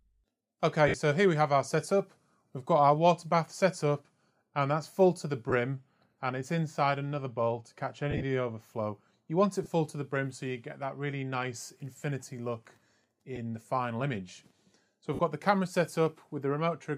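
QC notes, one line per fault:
0.88–0.94, 5.50–5.53, 8.11–8.24, 9.64–9.66, 13.36–13.38, 15.15–15.19 s: lost LE Audio frames, gaps of 10 to 80 ms, the 8.11 s stretch scattered with runs up to about 40 ms. The LC3 decoder repeats the last spectrum with random signs, so tones smear into noise, fading after a few frames.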